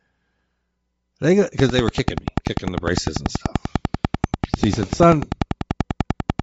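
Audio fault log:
throughout: Bluetooth LC3 compression. The speech has a plainly audible breathy, grainy edge, with the upper spectrum thinned out and filled in with noise. This is likely LC3 coding at a low bitrate, and the sound fits roughly 32 kbps with 10 ms frames.
1.59–6.41 s: train of clicks. Regular ticking at about 10.2 clicks per second, roughly fifty in total, of very similar shape and peaking about 15 dB above the speech, audible in pauses too. The likely cause is periodic pulse interference from nearby equipment or a struggling interface.
4.99 s: lost LE Audio frames. A brief 10 ms patch where the decoder repeated the previous spectrum with randomised signs to conceal the gap. The length fits a single lost 10 ms frame.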